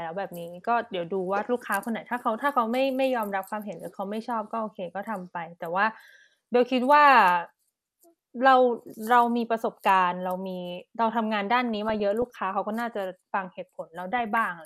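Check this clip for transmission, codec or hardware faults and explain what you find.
The speech is hit by DAB burbling in two bursts. The first runs from 11.57 to 12.30 s. The second runs from 13.98 to 14.38 s. Weak reception lets bit errors slip past error correction into the MP2 audio data. Corrupted samples put short blips of noise in single sub-bands, and corrupted scale factors make sub-bands jump in level for up to a frame. The second burst is denser, which points to roughly double the error rate.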